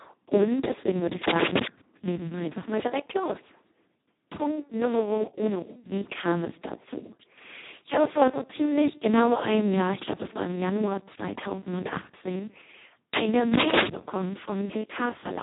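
Throughout, heavy Speex codec damage leaves speech hoarse and robotic, pointing to a bitrate near 2 kbps; a spectrogram shows nothing above 3.8 kHz.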